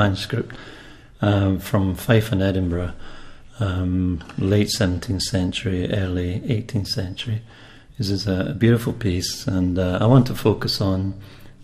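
No faults are audible anywhere in the recording.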